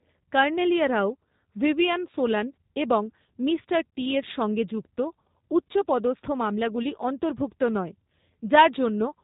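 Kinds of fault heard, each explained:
G.729 codec: the speech sounds rough and plainly synthetic throughout, with nothing above 4 kHz, as heavy model-based coding rebuilds it at a rate fitting 8 kbit/s.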